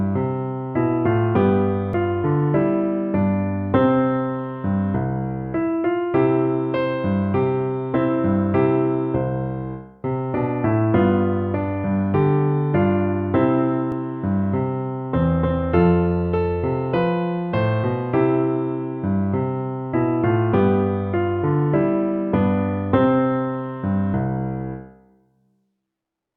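At 1.93 s and again at 13.92 s there's an overlap between stream segments: the player trims a few milliseconds it thinks are duplicated at a boundary with 6 s segments, so the waveform jumps and you hear a small click or skip.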